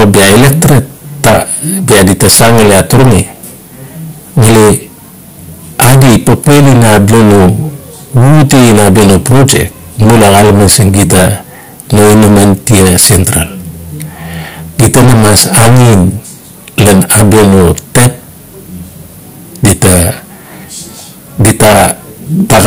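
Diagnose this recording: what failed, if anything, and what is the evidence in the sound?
Harsh fuzz on every loud syllable throughout the speech: hard clipping, driven about 29 dB past the converter's ceiling, flattening roughly a fifth of samples.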